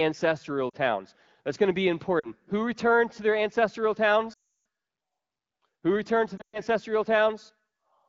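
Lost AMR speech frames break up the speech four times, through wideband coding at 12.65 kbit/s. At 0.70 s and 2.19 s, about 40 ms drops out, which fits two lost 20 ms frames. Each is brief. From 4.33 s to 4.53 s, about 320 ms is lost. The decoder reuses its last good pitch and vocal tract settings at falling gain, so the sound drops to near silence within two frames. From 6.37 s to 6.60 s, losses scatter, the longest gap 120 ms. Speech returns weak or rough for a moment.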